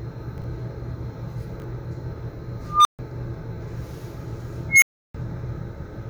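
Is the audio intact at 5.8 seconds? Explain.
Yes, the audio at 5.8 seconds is intact, with no dropout, click, distortion or other fault at that moment.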